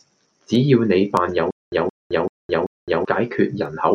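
Speech, with word clock ticks from 0.24 s to the end. Sharp ticks of uneven strength recur about every 0.3 s, around fifteen in all. A receiver running on its own clock is reading a digital link. The drift fits clocks roughly 70 ppm apart, with one sample slipping at each tick. From 1.51 s to 3.05 s there is a stutter with silent gaps. A 0.17 s burst plays again four times. Each repeat is followed by 0.21 s of digital silence, giving a 0.39 s cycle. The audio meant for that stretch is missing. The likely cause is a stalled player or stream replaying its last fragment at each retry before running empty.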